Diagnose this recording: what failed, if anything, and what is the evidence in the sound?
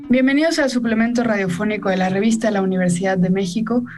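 Nothing failed here as far as I can hear: the audio runs without a glitch at any stage, so there's nothing to trace back to the wiring, the converter or anything further down the chain.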